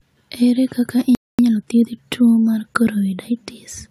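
At 1.15 s the speech drops to silence for about 0.24 s, a playback stall, likely the player starving for data. From 1.39 s to 1.85 s comes time-compressed catch-up: the speech runs hurried at 1.5 times normal speed, yet its pitch stays unchanged.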